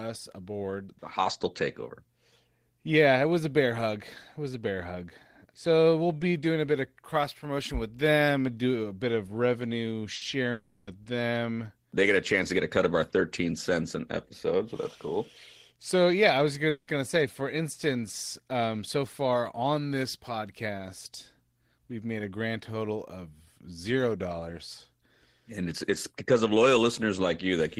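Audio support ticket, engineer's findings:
Burst of packet loss, 10.15 to 10.24 s. The last speech sound is held and faded for about 60 ms, then speech resumes with about 60 ms skipped. This points to receiver-side concealment bridging a short run of consecutive packets that were lost or arrived too late for the jitter buffer.

Long network dropout, 10.51 to 10.90 s, likely cause. A fading held buzz or hiss fills about 360 ms with no silent tail, and speech returns with about 360 ms missing. No packets arrived across the stretch, and concealment extrapolated the last frame throughout.

Long network dropout, 16.69 to 16.90 s, likely cause. Concealment fades over about 180 ms, reaching about 60 ms of silence, and speech returns with about 180 ms gone. The incoming stream stalled, and the receiver ran out of material to extend.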